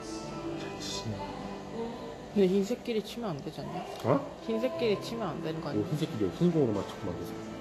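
Throughout, the sound stops dead at 14.2 kHz, with smeared, swirly artefacts of a low-bitrate encode, yet it arrives as a high-bitrate MP3. This is most likely low-bitrate audio saved at a high bitrate: a roughly 34 kbit/s Vorbis-style encode re-saved near 312 kbit/s, which kept those losses.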